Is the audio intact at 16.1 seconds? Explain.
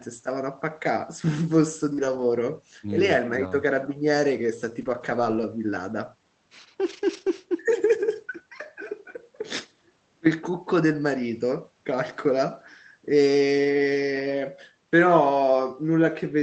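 Yes, the audio is intact at 16.1 seconds, with nothing beyond the ordinary coding character and band-limited top end of the call path it passed through.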